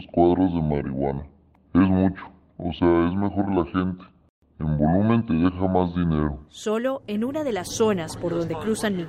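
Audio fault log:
No faults heard anywhere in the audio.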